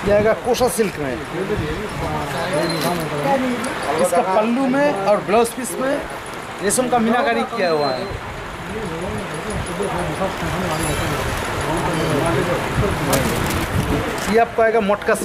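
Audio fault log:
13.13–13.70 s, cable scratch noise: a brief patch of dense, irregular crackling and rustling rides over the sound, roughly 10 dB below it, for just over half a second, likely from a worn cable or connector shifting and rapidly varying its contact resistance.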